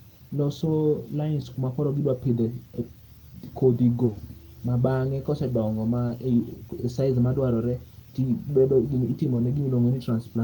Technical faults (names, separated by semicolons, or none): short concealed packet loss